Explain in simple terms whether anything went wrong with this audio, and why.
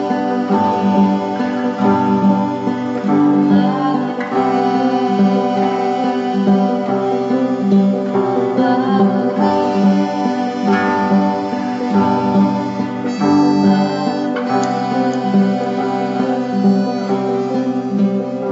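Nothing stood out as wrong on listening to this audio; no moment in it caught the ear as a problem.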